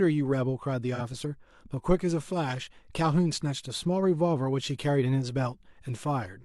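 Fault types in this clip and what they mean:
AAC frame loss with concealment: from 0.95 to 1.01 s, a brief stretch of the speech turns smeared and noisy, with a phasey, hollow quality. About 43 ms of coded audio went missing, which fits a single lost frame, and the decoder covered the gap by rebuilding it from the last good spectrum with randomised signs and estimated energy. The gap was too short to fade toward silence, so the fault is heard only as a brief blurred patch.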